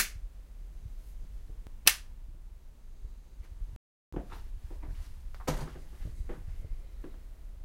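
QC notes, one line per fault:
3.76–4.13 s playback stall: the sound stops mid-flow for 0.36 s and then resumes, likely because the player ran out of data or its thread was blocked. The waveform shows a sudden near-flat gap, and the spectrogram shows a blank vertical band spanning every frequency.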